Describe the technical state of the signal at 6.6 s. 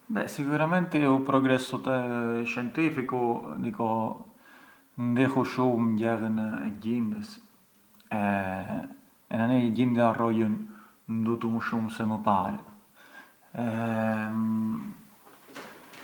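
At 6.6 s the speech signal is intact, with no dropout, clipping, distortion or other fault audible at that point.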